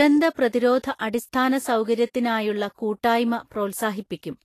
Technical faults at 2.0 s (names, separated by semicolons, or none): Vorbis compression